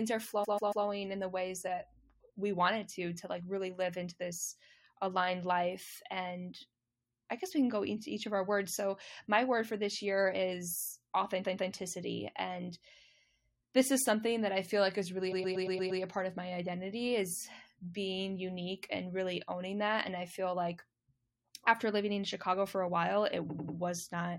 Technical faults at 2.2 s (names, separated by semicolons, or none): none